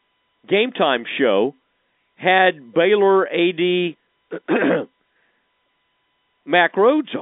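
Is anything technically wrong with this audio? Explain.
No, nothing's wrong here: it's speech carried over an ordinary telephone line, so the band stops a little under 4 kHz just as that kind of coding should.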